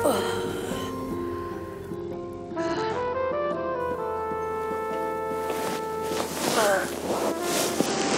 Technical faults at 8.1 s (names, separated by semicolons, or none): Bluetooth SBC bit pool drop